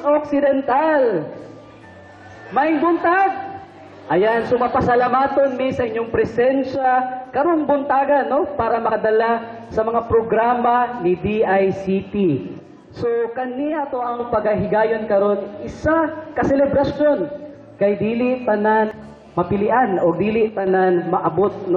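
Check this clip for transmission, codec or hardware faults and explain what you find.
There are two kinds of fault: three stretches where the level suddenly sags, and two small forward jumps.

From 6.75 to 6.85 s, 12.60 to 14.20 s and 20.49 to 20.67 s, the sound abruptly drops by about 6 dB and then returns. This is likely one channel dropping out. With one stereo side gone, the mono sum loses half its shared content, and anything only in that side vanishes.

At 18.91 to 18.94 s and 21.26 to 21.29 s, the audio leaps ahead, by roughly 150 ms and 50 ms. Compressed frames were skipped here, so the audio jumps ahead by the length of the frames left out.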